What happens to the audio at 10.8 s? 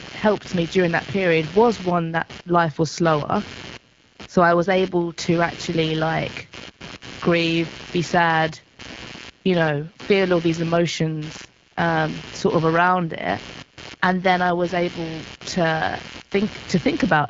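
At 10.8 s the sound carries computer activity noise, which runs through the whole clip. Load changes in the computer's processor, graphics card or mouse are disturbing the ground that the audio circuit shares with it, so those current swings leak into the signal. The result is a buzzing, chirping texture pulsing at roughly 150 Hz, sitting about 15 dB below the speech and following the machine's activity rather than the talking. Nothing in the sound reaches above about 7.5 kHz through the HD Voice path.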